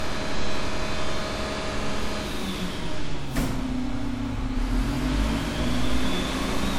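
Generation loss throughout: the sound is swirly, hollow and smeared with blurred attacks, likely from roughly five passes through WMA at about 96 kbit/s.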